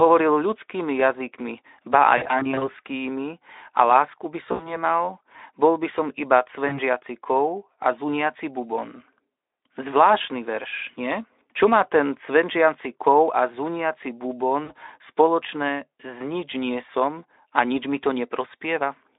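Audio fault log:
2.17–2.64 s, 4.51–4.77 s, 6.67–6.79 s, 14.63–14.72 s: VoIP packet loss concealed by the speech codec, after "ľudskými jazykmi ba", "a lásku by" and "cvenčiaci kov a zuniaci". Lost frames are filled by stretching the last pitch into a fading buzz rather than by silence, so the sound stays weak briefly after returning. The first span is scattered short gaps, up to 40 ms each.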